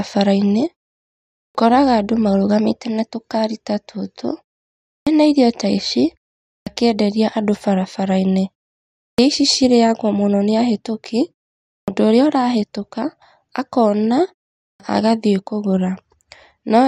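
Speech with a clipped start after a pause, six times: 1.45 s before "andũ marũgamite na tũkaari", 4.97, 6.57 after "irio ta ici", 9.08 before "ici cirĩagwo mũno nĩ", 11.78 and 14.7 s. About 100 ms of each onset is lost as the output device wakes from sleep after pauses of 0.44 to 0.77 s.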